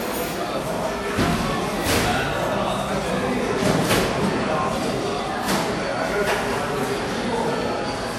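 Throughout the audio there is generation loss: a swirly, hollow texture with smeared transients and nothing above 19.5 kHz. This likely comes from around seven successive lossy encode-decode passes, consistent with WMA 1 near 96 kbit/s, each adding fresh quantisation noise and spectral gaps.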